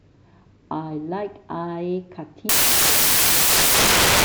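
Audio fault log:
2.49–4.25 s, samples built from the wrong bytes: sample bytes are misassembled, so fast-changing low bits dominate, giving loud, harsh broadband noise to the end.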